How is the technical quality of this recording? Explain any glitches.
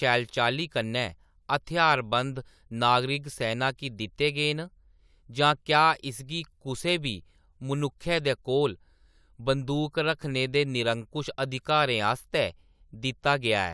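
No audible glitches or technical faults anywhere in the recording.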